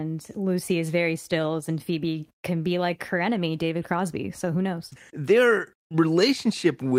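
Speech, with nothing technically wrong to report anywhere in the clip.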